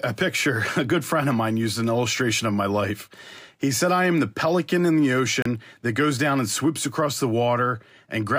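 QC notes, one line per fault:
5.42–5.46 s, digital broadcast dropout: after "the pelican in the", the speech mutes for about 32 ms, consistent with a single lost frame, then resumes at "that goes down and".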